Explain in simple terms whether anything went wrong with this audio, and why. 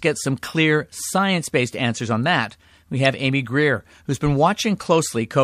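At about 3.05 s, right after "answers on that we", a brief glitch cuts into the speech. This is a corrupt frame decoded: a short chunk of the compressed file had some of its data scrambled, and the player decoded it anyway, briefly putting sound at the wrong pitches. Only a single frame seems affected. A plain dropout would leave a gap of silence, but here you hear an added burst of wrong sound over the speech.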